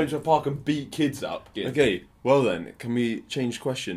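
Nothing in the audio stood out as a technical problem on listening.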